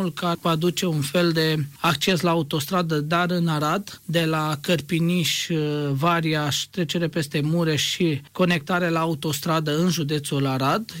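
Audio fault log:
0.35 s, damaged data in a compressed stream: corrupted bytes make the decoder misread a frame and resync at the next header, leaving a brief blip.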